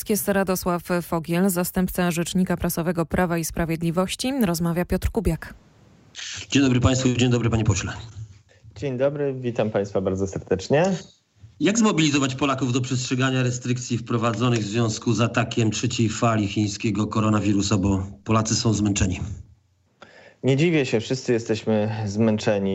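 Nothing stood out as a technical problem on listening.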